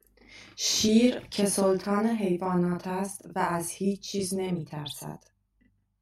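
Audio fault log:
Throughout, channel delay (doubling): one channel arrives 40 ms behind the other, and summing both to mono lays a late, equally loud copy over the original, so each syllable of speech sounds doubled, like a tight slapback echo trailing right behind it.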